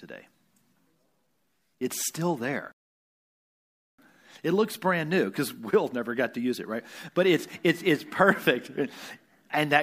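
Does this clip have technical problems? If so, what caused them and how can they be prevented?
Yes. A rebuffering stall hits at 2.72 s. The speech cuts to silence until 3.99 s and then resumes exactly where it stopped, so nothing is missing, but 1.27 s of dead time is inserted. The player ran out of downloaded audio and waited for more to arrive. On a waveform this is a flat gap, and on a spectrogram a blank vertical band. A larger playback buffer or adaptive bitrate streaming would prevent it.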